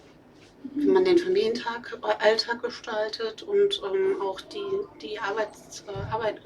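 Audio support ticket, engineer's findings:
No faults found on listening.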